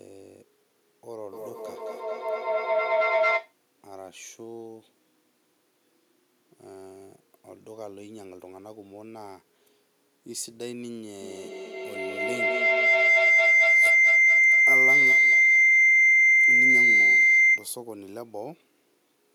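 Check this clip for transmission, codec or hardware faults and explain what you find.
Feedback howl occurs twice: 1.33–3.59 s (near 700 Hz, about 14 dB above the speech) and 11.21–17.76 s (near 2 kHz, about 18 dB above). A microphone-to-loudspeaker loop gains level on each trip, so unlike an echo, the repeats grow into a tone pulsing roughly every 200 ms.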